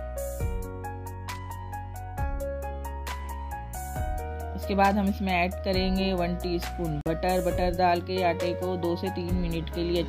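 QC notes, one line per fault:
7.01 to 7.06 s, block of digital silence: the sound drops to silence for about 46 ms, which fits a 2048-sample buffer left unfilled.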